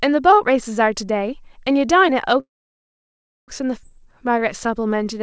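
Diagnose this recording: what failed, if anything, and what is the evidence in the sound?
Call audio freeze, 2.40 to 3.50 s, network and jitter buffer stage. The speech halts, its last fragment is briefly continued, then about 1.01 s of silence follows. Then it resumes exactly where it stopped, with 1.08 s inserted and nothing lost. The likely cause is delayed packets emptying the buffer.

Skip ahead, 3.82 to 3.85 s, jitter buffer stage. Playback jumps forward with only about 10 ms of fill, and roughly 0.7 s of speech is gone, its two edges butted almost directly together. The stretch was dropped in transit or by the overflowing buffer, cutting delay by about 0.7 s.

Jitter buffer slow-down, 3.99 to 5.19 s, call processing stage. The speech runs at 91% speed with unchanged pitch, and sounds are drawn out. Repeated pitch periods add 113 ms as the buffer rebuilds its reserve. These are heard through the G.722 call path, which leaves nothing above 8 kHz.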